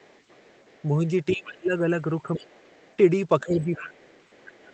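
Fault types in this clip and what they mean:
speech suppressed in double talk: The speech ducks in three places, a brief dip of about 15 dB in the opening 0.04 s, a deeper dip of about 25 dB between 1.33 and 2.58 s, and another of about 15 dB from 3.43 to 3.94 s. Each time the talker sounds pushed back while a second voice is present. The likely cause is an echo canceller that could not tell near-end speech from loudspeaker echo and attenuated both.
other side's voice leaking through: A faint second voice sits under the speech from 0.03 to 0.83 s at about 35 dB below the talker, surfaces more clearly in a short scrap from 1.44 to 1.51 s at about 20 dB down, returns from 2.36 to 2.96 s at about 30 dB down, and persists from 3.82 s to the end at about 25 dB down. This is likely far-end audio from the loudspeaker that the echo canceller did not fully remove from the microphone.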